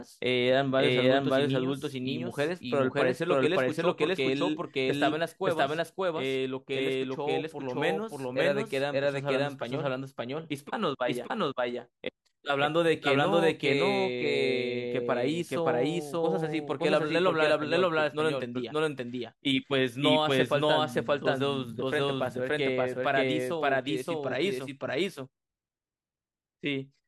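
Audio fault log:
throughout, doubled audio track: a similar-level full-band copy trails about half a second behind, likely from a slower second capture; spectrogram shows each pattern twice, offset.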